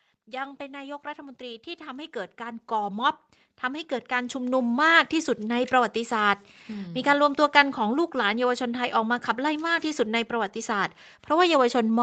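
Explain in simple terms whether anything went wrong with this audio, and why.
Automatic gain rising happens twice, from 0.25 to 3.1 s and again from 3.61 to 5.75 s. The level control slowly turns the volume up, and the background noise swells along with the speech, so it isn't someone simply moving closer.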